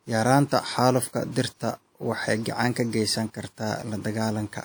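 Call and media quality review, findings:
Low-bitrate audio saved at a high bitrate, throughout the speech. Smearing and coarse detail fit a likely earlier low-bitrate encode, possibly WMA near 64 kbit/s, then MP3 at about 255 kbit/s. Unlike a plain low-bitrate file, the bandwidth runs to 20.2 kHz, but the high rate restores nothing the first pass discarded.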